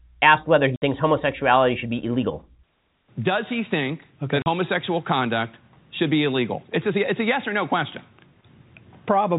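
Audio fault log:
0.76 s and 4.42 s: packet loss filled with silence. The speech drops out for 60 ms after "asked whether he" and for 40 ms after "he think okay that". Both gaps fit whole 20 ms packets replaced by silence.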